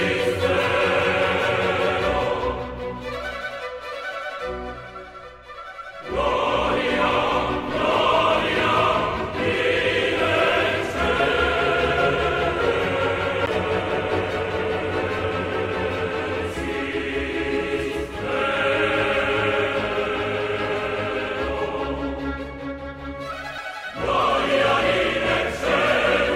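The laser loses its track on the disc and lands on a different turn of the spiral, causing a CD skip at 13.46 s and again at 23.58 s. Each time the player mutes very briefly, around ten milliseconds at the first and only a few at the second, so a small tick marks the break. The sound then resumes from a different point on the disc, abruptly moving the audio forward or back.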